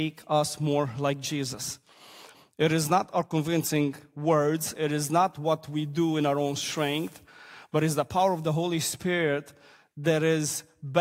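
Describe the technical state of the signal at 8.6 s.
Nothing is wrong with the signal at 8.6 s; the audio is intact at that moment.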